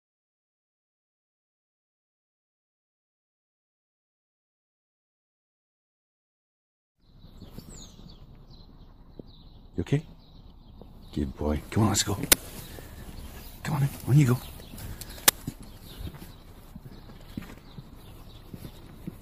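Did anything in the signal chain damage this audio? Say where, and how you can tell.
Yes, a driver buffer fault: uninitialised buffer bursts of loud digital noise at 12.32 and 15.28 s, each 12 ms, fitting a 512-sample block of leftover memory.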